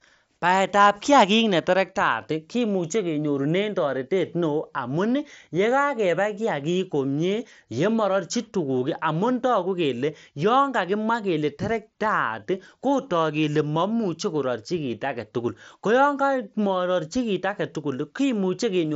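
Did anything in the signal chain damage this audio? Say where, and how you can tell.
Yes, concealed Bluetooth headset packet loss on the wireless link at 13.75 s: one 7.5 ms packet was patched with repeated recent waveform, a near-hidden blip rather than a silent dropout.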